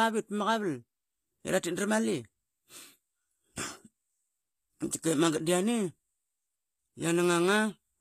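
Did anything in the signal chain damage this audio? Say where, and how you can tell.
Yes, at the codec stage, throughout the speech. Sibilants sound gritty and metallic, and nothing reaches above 14.9 kHz. The likely cause is HE-AAC compression: treble rebuilt by copying lower bands upward, which fits a low bitrate around 24 kbps.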